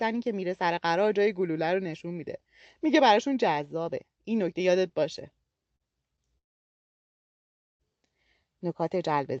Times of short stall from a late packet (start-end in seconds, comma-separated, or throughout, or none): 5.76-5.82